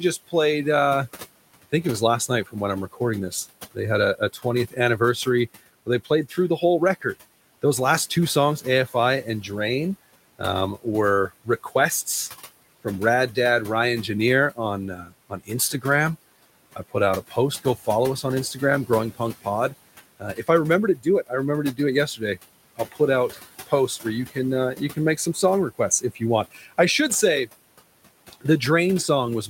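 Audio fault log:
Throughout: noise suppressor artifacts. The room noise, about 18 dB under the speech, gets pulled down about 17 dB between phrases, so the leftover background pumps.
1.63–7.63 s, 8.61–9.44 s, 10.39–11.73 s, 14.56–15.85 s, 16.76–28.43 s: speech cut by the noise suppressor. The suppressor mistakes quiet speech for noise and ducks it, by about 9 dB up to about 17 dB. Soft bits right after "uh I" and "last two songs" sound swallowed. Each run loses anywhere from a brief moment up to about one and a half seconds of speech.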